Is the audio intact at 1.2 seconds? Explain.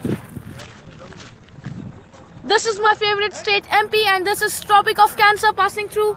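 No. At 1.2 s the audio sits inside a call bitrate drop lasting from 0.61 s to 3.67 s. A fall in the call's bandwidth estimate forced the encoder to spend far fewer bits. The sound points to a drop from around 32 kbps to roughly 11 kbps, held at its lowest for about 2.3 s. The coarser coding makes the sound rough and watery, and the top end is cut off above 8 kHz, so it turns muffled.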